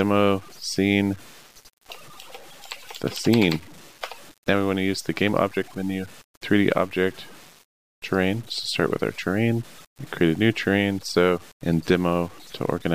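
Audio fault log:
Throughout, low bit depth without dither: a grainy, rough distortion rides on the sound and shifts in character as the sound changes, growing harsher and more broken on quiet passages, where the faintest parts sputter between two levels or fall silent. The cause is likely truncation to about 7 bits with no dither, so the rounding error tracks the signal rather than forming a steady hiss, sitting only about 25 dB below it.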